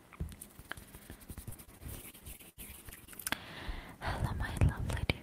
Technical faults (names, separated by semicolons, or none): repeated packet loss (robotic sound)